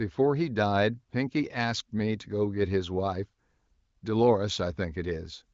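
No technical faults are present: the speech carries the narrowed band of the AMR wideband (HD Voice) codec, with nothing above 7.5 kHz, and its clarity fits one of that codec's highest rates, around 23 kbit/s.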